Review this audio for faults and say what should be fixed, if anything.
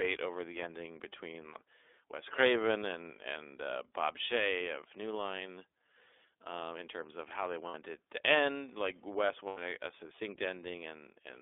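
The iLBC codec carried the whole recording, coding each 30 ms frame on its own within a 300 Hz to 3.6 kHz band, which fits its 13.3 kbps mode. The speech is muffled, lacks everything above 3.6 kHz, and sounds plainly rough and synthetic. Sending it over a wideband codec such as Opus would prevent this.

Lost iLBC frames occurred twice. Packets went missing, and the decoder filled each gap by repeating the last pitch cycle mixed with noise. At 7.67 s, after "terms of how they" and before "it to end like", a 60 ms gap, fitting two lost frames, becomes a held, buzzy vowel. At 9.47 s, just before "a a", the same happens for 90 ms, fitting three frames. The voice returns to normal immediately after each gap. Adding packet redundancy or forward error correction on the network path would prevent these dropouts.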